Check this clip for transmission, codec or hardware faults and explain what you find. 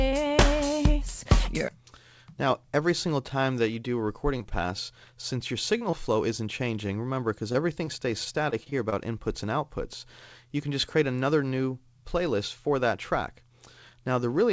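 Two packet-loss faults appear, both on a call path whose audio stops at 8 kHz, consistent with a G.722 codec.

Repeated packet loss (robotic sound), 4.38–4.52 s: three closely spaced holes, the longest 18 ms, were filled by extending prior audio. About a third of the stretch is concealed, giving a choppy texture with pieces missing.

Scattered short gaps, 5.78–8.94 s: roughly ten isolated losses, each under about 30 ms, were patched by continuing the last sound. The result is brief ticks and smears in otherwise clear sound.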